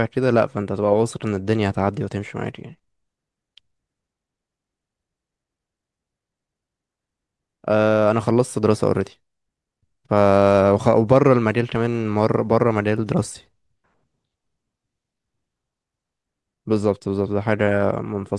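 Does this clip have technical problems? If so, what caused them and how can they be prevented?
No, this clip has no technical problems that can be heard. There is no cause to trace and nothing to prevent.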